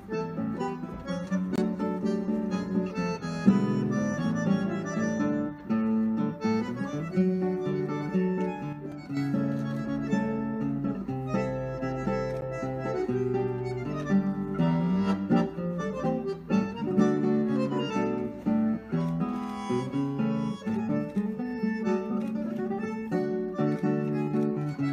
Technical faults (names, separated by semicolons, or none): block of digital silence; sudden gain jump